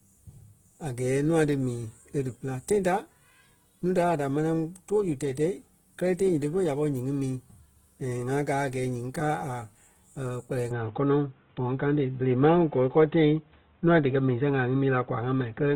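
Speech, with plainly audible grainy, rough coding noise throughout but full bandwidth up to about 20.1 kHz, likely Opus compression in its music mode at around 16 kbps, grainier than MP3's swirl. From 10.71 s the sound abruptly dulls, with nothing above 3.8 kHz, a level step of around 5 dB and new low background noise, without any gap. This sudden mid-clip change points to the input being switched to a poorer device rather than to codec narrowing.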